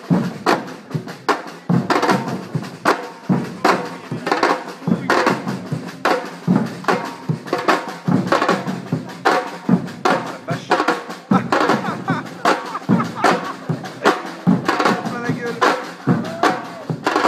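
No technical faults can be heard anywhere here.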